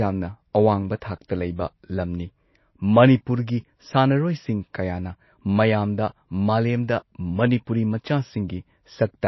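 From start to finish, the speech has nothing above 5.8 kHz and a watery, swirling texture, likely from MP3 compression at a low bitrate, around 24 kbps. Unlike a plain low-pass filter, weak frequency lines flicker between frames, which causes the swirl.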